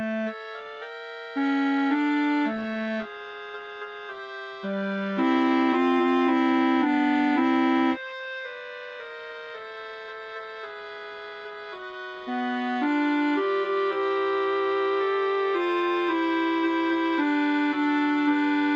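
No faults are audible; the sound has passed through a call path whose codec band-limits it at about 8 kHz, which fits a wideband Opus setting, and the jitter buffer introduces no audible disturbance.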